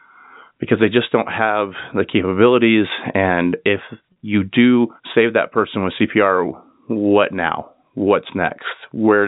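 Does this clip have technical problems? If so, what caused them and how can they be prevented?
Yes. There is packet loss with pitch repetition from 4.12 to 4.16 s: about 40 ms of the speech never arrived, which fits two 20 ms packets going missing. To cover the gap, the receiver replayed the last pitch period it had and began fading it out. Because the gap is shorter than that fade, the speech doesn't drop to silence; it briefly sounds held and slightly buzzy before it resumes. The G.711 telephone coding itself leaves little audible damage. To prevent this, send the call over a network path with less loss and a suitably sized jitter buffer, or add forward error correction so lost packets can be rebuilt.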